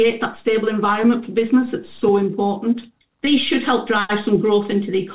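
At 1.02 to 1.05 s and again at 3.25 to 3.28 s, short concealed packet loss leaves brief smears where about 20 ms of audio, lost in transit, was patched by extending the preceding sound, all within a call path band-limited at 4 kHz.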